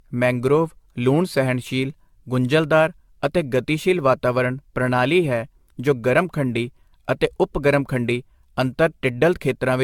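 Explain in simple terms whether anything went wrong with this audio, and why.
Something did go wrong: the speech has generation loss from start to finish. It sounds swirly, hollow and smeared, with blurred consonant attacks and nothing above 17 kHz. The likely cause is repeated AAC compression, around ten rounds, each adding fresh damage.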